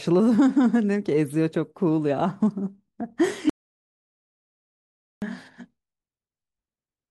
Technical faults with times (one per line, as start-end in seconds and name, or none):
3.50-5.22 audio dropout to silence